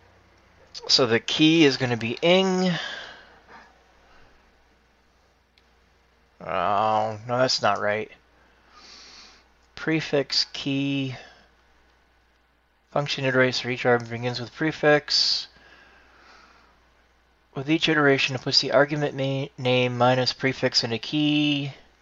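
No technical faults can be heard anywhere in the audio, and the signal stays steady and intact throughout.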